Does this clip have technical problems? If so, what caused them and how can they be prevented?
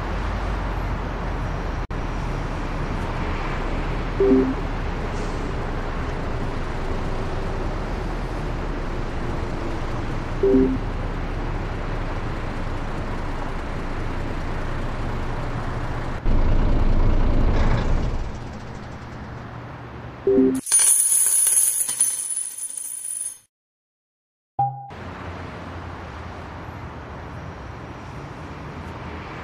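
Yes. At 1.85 to 1.91 s the sound breaks into a 55.5 ms gap with smeared edges, then resumes where it stopped. This is a gap at a join of encoded pieces: separately encoded segments kept their encoder start delay and end padding. To prevent it, trim the encoder delay and padding before joining, or encode the whole piece in one pass.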